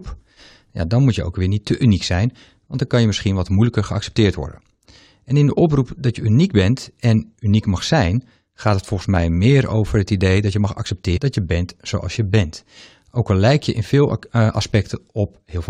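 At 11.16 to 11.18 s, between "idee dat je mag" and "dat je bent zoals", the speech is broken by damaged data in a compressed stream. For about 23 ms the decoder received corrupted frame data, misread it and lost sync, then resumed once it found a valid frame header further on. The result is a brief glitch that sounds out of character with the surrounding speech.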